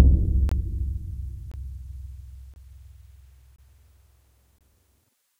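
A gap between chunks recurs five times, at 0.49–0.52 s, 1.52–1.54 s, 2.54–2.56 s, 3.56–3.58 s and 4.58–4.61 s. The audio was delivered in 1.0 s chunks, and each join leaves a 23 ms silent hole. Unlike a dropout, nothing is missing: the sound picks up exactly where it stopped, and the holes fall at a strictly even spacing of about 1.02 s.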